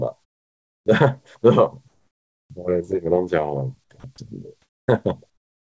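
At 0.24 to 0.86 s, 1.88 to 2.50 s, 4.62 to 4.88 s and from 5.30 s to the end, the gaps get comfort noise in place of the background. It's a flat, featureless hiss, about 31, 5, 2 and 18 dB quieter than the real background. The likely cause is the sender going quiet during pauses and the receiver filling them with synthetic noise. Above 8 kHz the call codec passes nothing.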